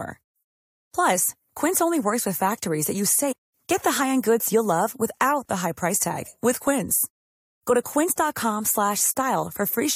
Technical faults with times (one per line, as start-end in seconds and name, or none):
3.31-3.33 stream segment skipped